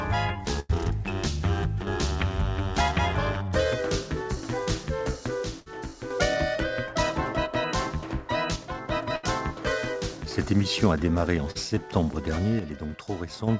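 At 0.60 to 0.72 s a burst of packet loss leaves about 80 ms missing. The receiver stretches the last sound into a fading hold, so the spectrogram shows smeared, frozen harmonics or noise before the audio resumes further on.

From 1.82 to 1.87 s the level drops abruptly by about 6 dB, most likely because one channel drops out. The waveform envelope steps down and then back up.

At 4.64 to 4.68 s a short concealed packet loss fills about 20 ms with continued sound. It is heard as a brief smear or wobble, and the spectrogram shows a blurred sliver.

From 5.44 to 6.10 s the level falls again by about 6 dB, likely one channel dropping out. A burst of packet loss sits inside it at 5.60 to 5.68 s, where about 60 ms is missing and the concealed tail fades.

From 8.56 to 8.88 s there is another 6 dB step down, likely one channel dropping out.

At 9.16 to 9.25 s a burst of packet loss leaves about 80 ms missing, covered by a decaying held buzz or hiss.

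At 11.51 to 11.57 s a short concealed packet loss patches about 40 ms, which is heard as a wobble.

From 12.59 to 13.48 s the level steps down about 6 dB, again likely one channel dropping out.

Throughout, the spectrogram is empty above 8 kHz, which fits a G.722 call path.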